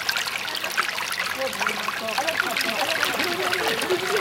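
At 2.64 s a doubled audio track begins and runs to the end. A second, full-band copy of the sound enters abruptly, trailing the original by around 0.7 s. It is roughly as loud as the original. The copy carries no decay or room colour, so it does not read as an echo. From there on, sounds are heard twice, cleanly stacked. The likely cause is a second capture through a slower path, or two out-of-step copies left in an edit.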